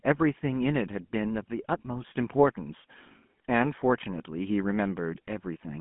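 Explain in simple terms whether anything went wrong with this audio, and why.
GSM full-rate codec damage runs through the whole recording, from 0 s to the end at about 5.8 s. The speech has been squeezed through the old GSM mobile-phone codec, which rebuilds the voice from a simple model of the throat and mouth driven by evenly spaced pulses. That crude rebuilding gives a plainly audible buzzy, gravelly roughness. The phone line also keeps only roughly 150 Hz to 3.4 kHz, with nothing above 3.8 kHz, so the sound is thin and muffled.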